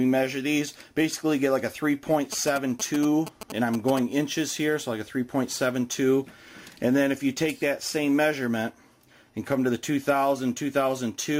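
From 2.33 to 3.99 s you get GSM signalling bursts: a nearby 2G phone is handshaking with the network, and the audio circuit rectifies its radio pulses into a galloping dit-dit-dit of short 217 Hz buzzes, sitting roughly 10 dB under the sound.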